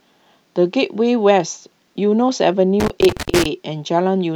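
From 2.80 to 3.46 s the speech is hit by loose connector crackle. A worn or dirty contact is making and breaking as it moves. Each break chops the signal. The result is an irregular burst of scratchy crackle.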